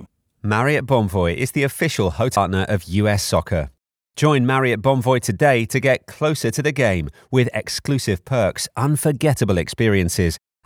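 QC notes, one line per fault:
2.36 s, CD skip: there's a tiny tick and the audio lurches to a different spot. The pickup got knocked, or hit a flaw, and its laser hopped onto another turn of the disc's spiral. The player drops out for just a few milliseconds while it relocks, then carries on from wherever it landed. That's why you hear a click followed by a discontinuity instead of a clean splice. The jump is whole revolutions of the track.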